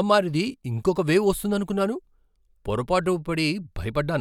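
No technical faults are audible.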